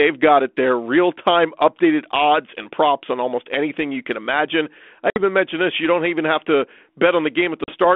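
Packet loss on an ADPCM call at 5.10 s and 7.64 s: about 60 ms, then 40 ms, of speech drops to hard-edged silence. The decoder's adaptive predictor and step size lose step with the sender's, so sound returns with brief distortion.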